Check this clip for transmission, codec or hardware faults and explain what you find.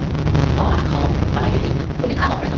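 Three faults are present in this speech clip.

Block size mismatch (truncated) runs throughout. Each block loses its tail, which fits 512-sample writes, leaving a 138 Hz buzz and speech 1.6 times faster at near-normal pitch. The unchanged pitch separates it from a simple resampling error.

A doubled audio track is heard from 0.25 to 1.65 s. A second copy follows roughly a tenth of a second behind at about equal level, likely from a slower capture path. Unlike room echo, it has no decay and starts and stops abruptly.

An AMR rate drop runs from 1.76 s to the end, with the AMR-WB codec falling from 12.65 to 6.6 kbit/s. Speech turns rough and synthetic, but the band stays the same and there is no gap, which separates it from a dropout.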